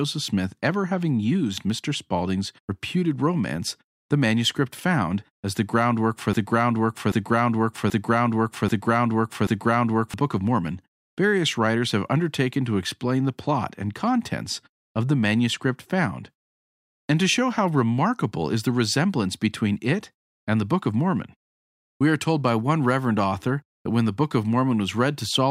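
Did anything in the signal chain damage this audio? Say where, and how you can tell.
Yes. Between 6.33 s and 10.14 s a broken-record loop takes over: a 0.78 s fragment of the speech repeats five times back to back, each repeat identical, with no new material in between. The stage is likely playback, encoding or streaming; one of these stalled and kept sending the last fragment it held. The speech that should have filled those seconds is lost.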